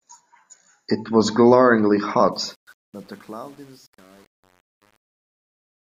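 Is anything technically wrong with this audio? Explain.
Yes. From 2.32 s to the end at 5.81 s, the fade-out suffers truncation distortion on a fade. The gain stage discards low bits without dither, which fits an 8-bit stage. From 2.59 s the shrinking waveform collapses into coarse steps, sounding gritty.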